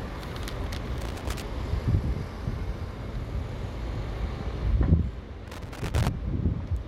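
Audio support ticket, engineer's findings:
Loose connector crackle, 1.01–1.42 s. Irregular burst of scratching over the sound. Probable worn or dirty jack or plug contact making and breaking as it shifts. Waveform shows signal chopped into ragged fragments with sharp spikes. Spectrogram shows broadband vertical streaks.

Loose connector crackle again, 5.48–6.09 s. Longer burst, same intermittent contact. Any DC on the line gives pops at each break. Spiky, gappy waveform, scattered full-band vertical lines on the spectrogram.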